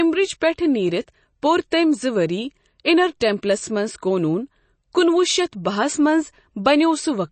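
Throughout, the speech sounds watery and swirly with nothing above 8.3 kHz, likely from MP3 compression; the damage fits a bitrate near 32 kbps.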